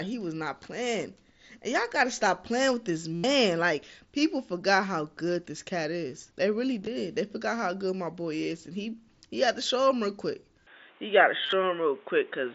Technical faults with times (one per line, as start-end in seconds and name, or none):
3.15-3.24 concealed Bluetooth headset packet loss
6.81-6.87 concealed Bluetooth headset packet loss
10.67-12.54 input switched to a poorer device
11.43-11.53 concealed Bluetooth headset packet loss